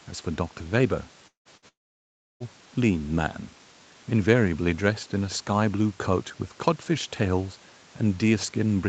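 A speech recording, band-limited at 8 kHz as you'd expect from an Opus call path, with trouble clustered between 1.27 and 2.43 s. At 1.27–1.48 s the sound trails off into a brief fading buzz or hiss, then roughly 120 ms of silence, and about 180 ms of speech never comes back. The same thing happens at 1.68–2.43 s, only worse: a short concealment tail, then around 670 ms of dead air, with about 720 ms lost in all. Both look like a long network dropout, likely where the stream stopped arriving entirely. Squeezed between them, at 1.57–1.65 s, is a burst of packet loss, a quick held sound that fades as the receiver stretches the last bit of audio over the gap, before picking up again about 60 ms further on.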